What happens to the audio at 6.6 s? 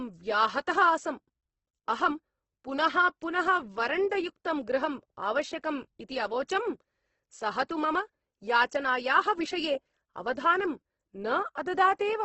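The speech at 6.6 s carries the same heavy coding damage present across the whole recording, most likely Opus compression. Nothing is heard above about 8.2 kHz, and the band that remains sounds rough and grainy rather than swirly. With bits this scarce, the encoder keeps each band's energy but fills the detail by folding lower bands upward or substituting noise. The result fits a low bitrate of around 12 kbps in Opus's music mode.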